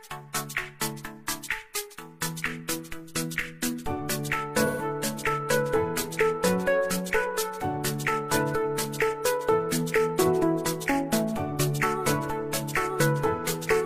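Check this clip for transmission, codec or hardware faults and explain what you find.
One transmission fault is present: AAC frame loss with concealment, from 4.66 to 4.82 s. About 128 ms of coded audio is missing, which fits roughly three consecutive AAC frames. The decoder bridges the gap by reusing the last good spectrum, randomising signs or interpolating energy instead of muting. The sound keeps its rough level and tonal colour but loses detail, so the patch comes across as smeared, noisy or phasey before clean decoding resumes.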